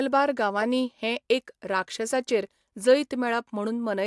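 Nothing stood out on listening to this speech recording.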